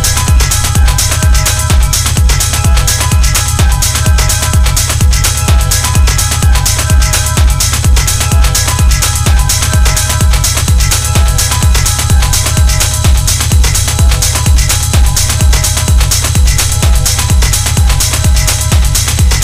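Hard clipping runs through the whole of this roughly 19-second audio clip. The signal arrives about 5 dB hotter than the stage can pass, so whenever it swings toward full scale its peaks are sheared off flat. Only a small fraction of samples, around one or two percent, hit that ceiling. The result is a crackle riding on the loudest moments rather than a constant fuzz, with the squared-off tops spraying added harmonics high into the spectrum.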